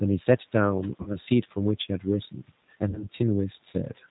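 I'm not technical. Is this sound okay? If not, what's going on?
No. The sound has been squeezed through the G.729 codec, a compression method used for internet phone calls. It rebuilds the voice from a rough model of the mouth and throat plus a few pulses. Nothing above about 4 kHz survives, so the speech is dull and narrow. You can clearly hear that it is slightly rough and artificial. It stays like that for the whole clip.

There are also two short dropouts, from 1.03 to 1.11 s and from 2.90 to 3.06 s. Each is VoIP packet loss concealed by the speech codec. A piece of about 30 ms went missing, which fits a single lost packet. The decoder filled the hole by stretching the last bit of voice into a fading buzz or noise. The sound then stays weak and smeared for a moment after the gap.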